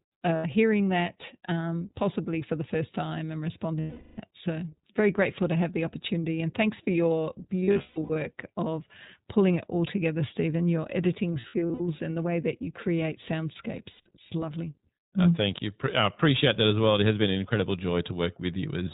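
The speech runs through the iLBC codec the whole way. Its narrowband coding discards everything above 4 kHz and rebuilds each 20 ms frame on its own, which fits the 15.2 kbps mode. The damage is plainly audible: the voice is dull, slightly rough and synthetic throughout.

Lost iLBC frames interrupt it five times, and each time the decoder fills the gap by repeating the last pitch cycle with added noise. From 0.36 to 0.46 s, just before "hearing that um possibly", about 80 ms goes missing and is heard as a short buzzy hold. From 3.80 to 4.19 s, after "the first time and", 380 ms is lost as one stretch, so the held vowel drags and fades. Between 7.61 and 8.18 s, losses totalling 360 ms are scattered over 560 ms, the longest lasting about 150 ms, making the sound stutter between brief held tones and returning speech. From 11.40 to 11.81 s, between "your editing" and "and the way that", 220 ms of losses are spread over 400 ms in short runs under about 70 ms, leaving a choppy, breathy flutter. 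From 13.92 to 14.08 s, a 140 ms gap becomes a brief buzzy hold. Because each frame decodes independently, the voice comes back almost immediately after every loss.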